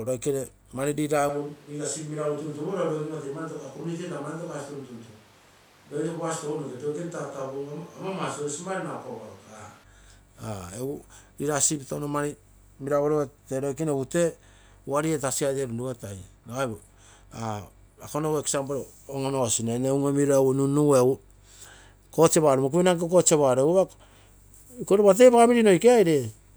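From 1.29 s to 9.84 s, the speech turns roomy and hollow. The change is abrupt in both directions. Bass thins and the level drops by about 5 dB. Room noise sits roughly 25 dB below the speech. The likely cause is a switch to a distant microphone.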